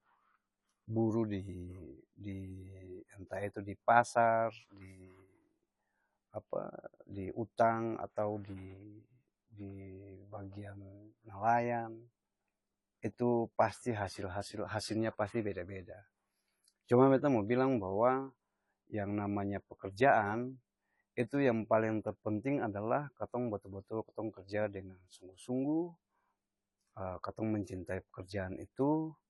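From start to finish the speech sounds dull and warbly, with nothing above 11.5 kHz; likely AAC compression, fitting a low bitrate around 32 kbps, smearing the spectrum.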